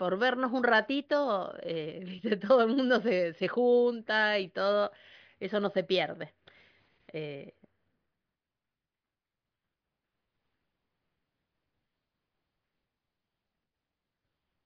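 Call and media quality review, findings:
No audible faults found.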